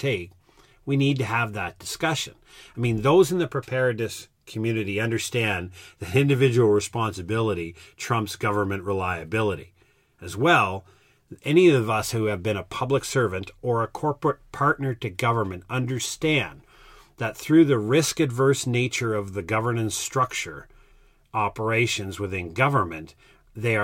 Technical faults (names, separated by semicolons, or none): none